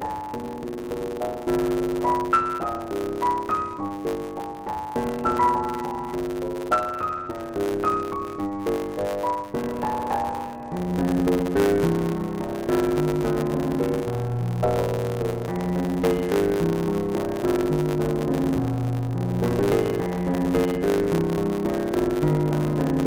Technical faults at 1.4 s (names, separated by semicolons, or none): block size mismatch (truncated)